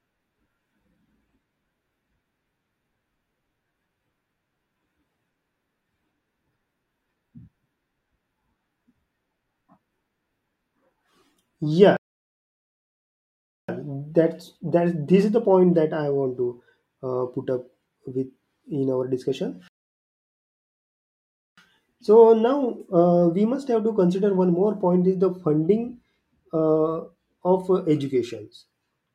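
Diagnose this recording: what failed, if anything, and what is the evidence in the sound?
The speech drops into dead silence twice, from 11.97 to 13.69 s and from 19.68 to 21.58 s, and each time picks up exactly where it left off, with "that's that this is" following the first gap and "with in our discussion" just before the second. That is a rebuffering stall at the playback stage. The player drained its buffer of downloaded audio and waited for more data. Nothing is lost, but about 1.7 s and 1.9 s of extra time are added.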